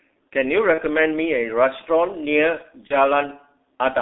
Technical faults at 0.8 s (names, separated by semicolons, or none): G.723.1 codec; VoIP packet loss concealed by the speech codec